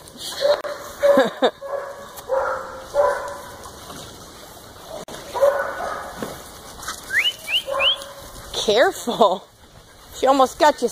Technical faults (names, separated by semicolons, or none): gap at a join of encoded pieces